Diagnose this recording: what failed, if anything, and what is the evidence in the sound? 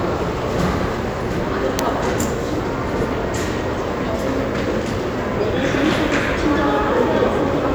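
Nothing in the recording stood out as a failure on listening.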